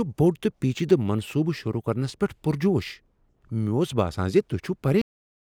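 At 5.01 s the speech stops abruptly, in the middle of a sound rather than at a natural pause, and drops straight to digital silence with no decay or room tail. That silence runs for the remaining 0.43 s of the clip. This is a cut-off end. The final stretch of audio was never written out, so the recording simply ends wherever the last saved buffer did, instead of where the speaker finished.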